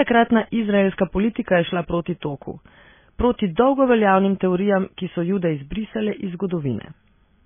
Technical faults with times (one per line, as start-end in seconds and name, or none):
0.00-7.46 MP3 compression